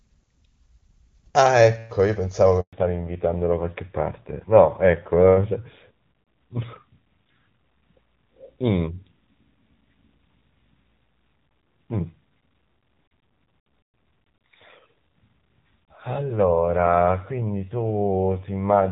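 A speech recording carrying a handover gap from 2.61 to 2.73 s: the sound cuts out for 120 ms while the call switches networks and no frames arrive. The silence is clean and total rather than filled with smeared or repeated sound, which separates it from ordinary packet loss. From 2.73 s to the end the clip shows a fallback to narrowband. Before the switch the audio has the full HD Voice band of AMR wideband coding, consistent with a high rate near 23.85 kbit/s. After it, nothing remains above 4 kHz and the sound becomes duller and rougher, pointing to a narrowband AMR codec at roughly 7.4 kbit/s. The added coding grit and the sudden onset right at the gap mark it as a codec change, not simple low-pass filtering.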